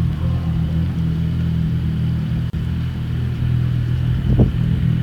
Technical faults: gap at a join of encoded pieces

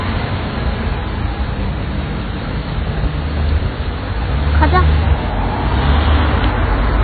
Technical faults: AAC compression; train of clicks

